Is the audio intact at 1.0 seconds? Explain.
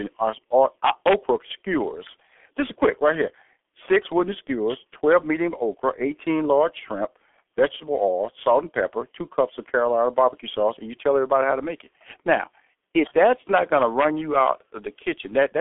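No. From 0.85 to 1.14 s an integer overflow wraps peaks that exceed the numeric limit to the opposite sign, producing violent cracks. On the waveform these look like abrupt sign-flipping jumps; on a spectrogram, broadband vertical streaks. Underneath, the G.723.1 codec muffles and roughens the speech throughout, leaving it hoarse with blurred consonants. A spectrogram shows nothing above 3.8 kHz, and the coarse, smeared detail fits a low rate near 6.3 kbit/s.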